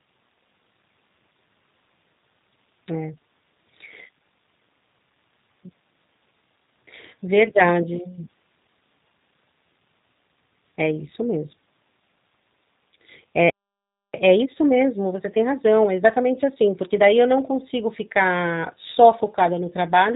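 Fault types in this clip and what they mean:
G.729 codec: Throughout the speech, the sound is rebuilt by a low-rate model that pairs a vocal tract filter and pitch predictor with a handful of pulses per frame, which fits an 8 kbit/s G.729A stream. Voices come out slightly rough and synthetic. On a spectrogram the energy stops sharply at about 3.8 kHz with empty space above, and harmonics look smeared and grainy. The waveform shows a slightly buzzy texture.
Playback stall: At 13.50 s the speech cuts off mid-flow and stays silent until 14.14 s, a gap of about 0.64 s. The likely cause is that the player ran short of data or its output thread was held up. On a waveform this is a flat line with an abrupt edge on each side. On a spectrogram it shows as a clean vertical band of nothing across all frequencies, sitting between stretches of normal speech energy.
Time-compressed catch-up: From 14.14 s to 17.14 s, starting with "eu não consigo ficar", the speech runs about 1.15 times faster at unchanged pitch. 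The player is trimming its backlog by removing short slices and cross-fading the joins, and this gives a hurried delivery. On a spectrogram, syllables and pauses are visibly squeezed in time while harmonic spacing stays put. The waveform shows tighter syllable envelopes and small, irregular seams.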